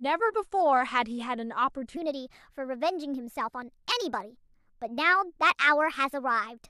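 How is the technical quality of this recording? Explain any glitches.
The recording has one clear fault: a section at the wrong speed. From 1.97 s to the end, the speech runs 1.21 times faster than it should. Speed and pitch rise together, so the voice jumps up by about three semitones at that moment. It sounds hurried and thin, with a slightly chipmunk quality. The likely cause is an editor or player fitting that part to the wrong clock, so it is read out too fast.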